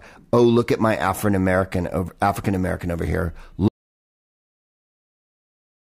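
At 3.69 s the input was likely lost, leaving only silence: an audio dropout to silence that cuts the speech into dead silence until the end.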